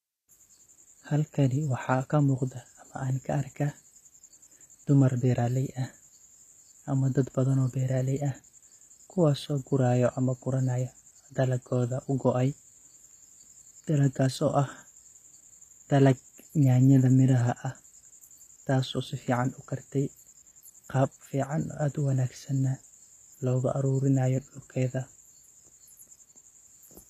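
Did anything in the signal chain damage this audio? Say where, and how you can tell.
Yes. The damage sits at the codec stage and runs through the whole speech clip. The treble has a synthetic, metallic quality, sibilants come out gritty and lispy, and nothing is present above about 14.9 kHz. That pattern points to HE-AAC compression, likely at a low bitrate around 24 kbps. The encoder kept only the lower spectrum and rebuilt the top by copying lower bands upward, so the high harmonics no longer line up with the real ones.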